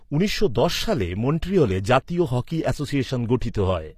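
A speech clip whose treble sounds bright yet synthetic throughout, with s sounds gritty and metallic and nothing above 14.9 kHz; this is likely HE-AAC compression, where upper bands are copied up from lower ones rather than coded, fitting a low bitrate near 24 kbps.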